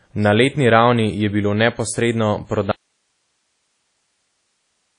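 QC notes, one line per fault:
throughout: WMA compression. A washy, ringing quality with hiss that swells and sinks with the speech; nothing is present above about 10.1 kHz, which fits a bitrate near 32 kbps and a likely WMA encoder. The spectrogram shows a hard ceiling and smeared, blotchy transients.
2.71 to end: audio dropout to a faint residue. Right after "ravni je bilo neposredno" the speech cuts off abruptly and only hiss remains, very roughly 50 dB down, likely a lost signal with a live path behind it. The waveform collapses to a thin, flat band of noise.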